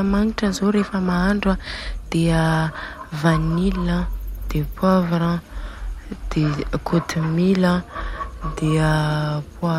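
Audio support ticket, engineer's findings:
Listened through the speech recording and nothing stood out, so there's no fault to log on this one.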